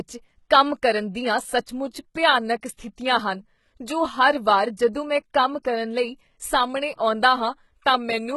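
A speech recording with heavy codec damage throughout, most likely from HE-AAC compression at a very low bitrate, roughly 16 kbps. Nothing is present above 11.8 kHz, and the upper band is synthesised from copied lower bands, so sibilants come out gritty and metallic, with treble that does not line up harmonically with the body of the voice. Just after "ਕੰਮ ਕਰਨ ਦੀਆਂ", from 1.65 to 1.68 s, a pre-echo places a short hiss about 24 ms ahead of a sharp attack. The codec spread the quantisation noise sized for the loud onset across its whole block, into the quiet gap before it, which also softens the transient.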